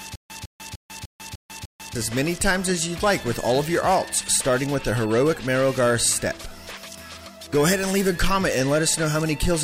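From the opening until 1.95 s the clip is in a stutter with silent gaps, already under way when it begins: a 154 ms burst of sound plays, then about 146 ms of silence, repeating every 300 ms, six times. The likely cause is a stalled player or stream replaying its last fragment at each retry before running dry, so the audio meant for that stretch is lost. The even silent gaps set it apart from a seamless loop or a single dropout.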